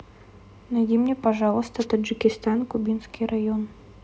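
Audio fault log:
1.79–1.85 s, wireless microphone noise hit: the radio link fades briefly, so receiver hiss swells into a short static burst, a broadband vertical smear on the spectrogram.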